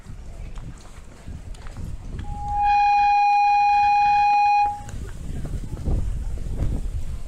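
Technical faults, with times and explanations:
2.24 to 4.93 s, loudspeaker feedback squeal: a steady 824 Hz tone swells up over about half a second and sits roughly 10 dB above the rest of the sound. A mic is hearing its own speaker, and at that one frequency the loop gain tops one, so it feeds itself.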